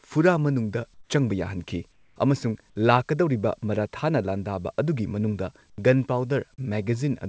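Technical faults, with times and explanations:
0.94–1.10 s, 1.92–2.16 s and 5.70–5.78 s: comfort noise in place of the background. In these pauses the real room sound gives way to a flat, featureless hiss, about 11, 7 and 9 dB quieter. The sender likely stopped transmitting and the receiver substituted synthetic noise.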